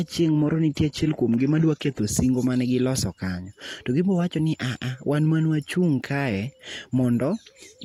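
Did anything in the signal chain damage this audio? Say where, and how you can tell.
Yes. From 0.0 to 2.0 s, just before "singo mane giloso kanyo", the speech is band-limited to about 12.3 kHz with synthetic treble and stronger codec artefacts, then sharpens abruptly without a gap. This is an adaptive stream starting at a low bitrate, consistent with HE-AAC near 16 kbit/s stepping up to roughly 96 kbit/s AAC-LC once throughput was measured.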